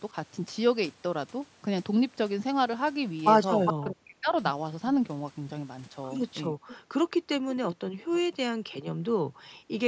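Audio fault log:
0.07–0.15 s, 3.78–4.33 s, 6.49–6.61 s: speech suppressed in double talk. The voice dips while the other side talks over it. At 0.07 s the dip is shallow, about 5 dB, and lasts roughly 50 ms. The later two cut much deeper, about 40 dB. Around 3.8 s the loss is about half a second, and near 6.5 s it is about a tenth of a second. The likely cause is an echo canceller that could not tell the talker from loudspeaker echo, so it turned both down.
3.65–3.85 s, 6.67–6.78 s, 8.12–8.73 s: echo leak. A copy of the voice returns 410 ms late. The first scrap is about as loud as the speech itself. The second and third sit about 20 dB lower and come through faint. This is likely loudspeaker sound at one end that the echo canceller failed to remove fully, so its microphone sent it back.
6.89–7.21 s, 7.77–9.71 s: background gated by the echo canceller. The room sound drops away by about 40 dB while the loudspeaker plays. 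In the first span it vanishes for only about 70 ms. In the second it is gone for about a second in total. The canceller clamps the microphone hard during playback, so the room sound falls silent. It comes back once the canceller releases.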